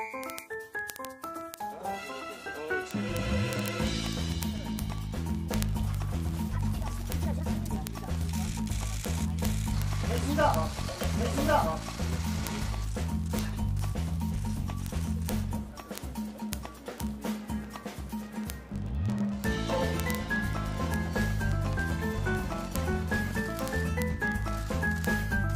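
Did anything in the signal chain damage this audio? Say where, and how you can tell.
Yes. The damage sits at a digital interconnect. The receiving device appears to run on its own clock rather than locking to the sender's, a clock mismatch of roughly 0.1 percent. The result is word clock ticks from 0.11 s through 25.54 s: sharp clicks of uneven strength, roughly every 20 ms, around a thousand in all. Each tick marks a point where the two clocks slip past each other and a single sample is dropped or repeated.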